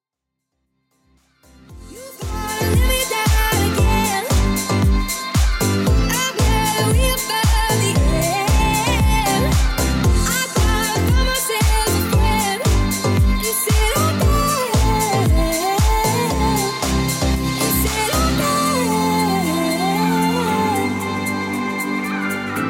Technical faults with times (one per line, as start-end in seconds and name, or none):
none